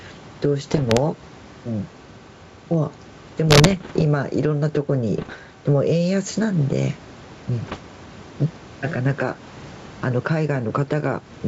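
Gain pumping runs through the whole recording. The room noise sits about 30 dB below the speech, and the gain swings by roughly 10 dB. The likely cause is input gain set far too high, with a fast limiter or compressor clamping down on each loud syllable. That squeezes loud and quiet passages toward the same level and leaves the speech sounding squashed.

Bit errors on an ADPCM link appear in four short stretches: 0.71 to 1.01 s, 3.46 to 4.03 s, 5.17 to 5.34 s and 7.66 to 7.78 s. Flipped bits corrupt the decoded samples and also knock the decoder's step size and predictor out of step, so each hit rings on for a few milliseconds. The result is pops and rough, gritty bursts with brief jumps in level. The last and shortest burst is the densest, at a bit error rate of roughly one to two percent. The earlier ones are around one percent or a little under. The wideband G.722 coding itself sounds clean and full-bandwidth up to about 7 kHz, which fits its full-rate mode.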